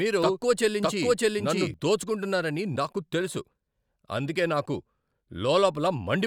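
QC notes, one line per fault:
0.0–1.74 s, doubled audio track: a slower second capture path, or an edit holding two copies out of step, is likely feeding the same speech into the mix twice. Already running when the clip opens, a full-band copy trails the original by roughly 0.7 s at about equal loudness, so every syllable is heard again as a clean, dry repeat with no decay or room colour, not an echo. The second copy cuts off abruptly at 1.74 s.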